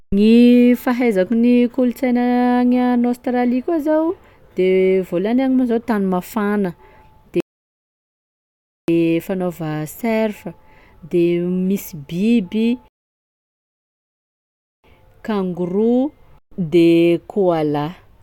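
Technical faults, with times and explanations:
7.40–8.88 s and 12.88–14.84 s, rebuffering stall: the speech drops to silence for 1.48 s, then 1.96 s, and picks up exactly where it stopped, with nothing skipped. The player ran out of downloaded audio and paused until more data arrived, adding time.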